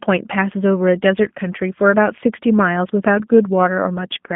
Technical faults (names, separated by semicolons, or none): G.729 codec